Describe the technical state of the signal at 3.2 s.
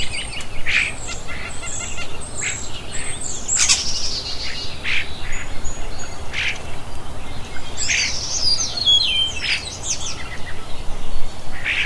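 At 3.2 s the signal is intact, with no audible technical fault at that moment.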